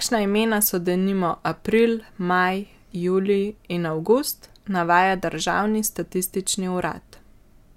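No technical faults are audible anywhere in the speech recording.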